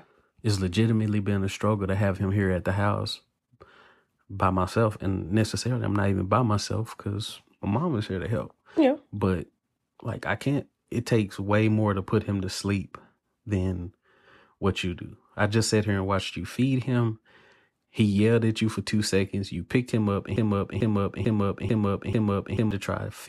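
At 20.36 s, just after "picked him up and", a broken-record loop begins. A 0.44 s fragment repeats exactly, five times back to back, until 22.71 s. The stream likely stalled and kept replaying its last buffer. The speech meant for that stretch is lost.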